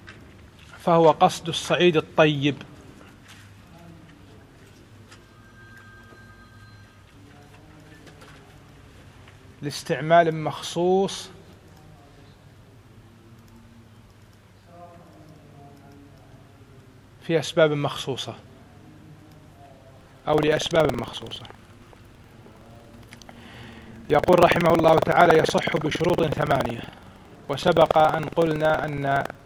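From 19.92 s to the end, buffer tearing sets in: a steady robotic rattle at 21.5 Hz, fitting a 2048-sample buffer. Roughly a tenth of each period replays audio about 100 ms old. Unlike underrun dropouts, there are no silent gaps, and the buzz follows the signal.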